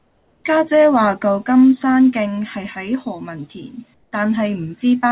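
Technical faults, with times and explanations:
0.00–0.44 s and 3.94–4.12 s, comfort noise in place of the background: in these pauses the real room tone gives way to a flat, featureless hiss about 5 dB quieter than the surrounding background, which itself sits roughly 44 to 46 dB below the loudest speech. The likely cause is the sender going silent during non-speech and the receiver synthesising noise instead. On a spectrogram the patch shows as an even, textureless wash, capped at 4 kHz like the rest of the narrowband call audio. On the waveform it appears as a slightly lower, uniform band.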